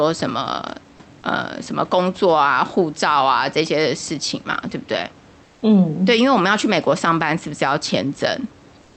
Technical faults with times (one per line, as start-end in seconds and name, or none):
5.45-5.61 comfort noise in place of the background
8.81-8.97 comfort noise in place of the background